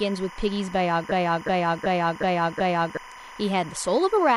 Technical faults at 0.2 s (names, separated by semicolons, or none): timecode bleed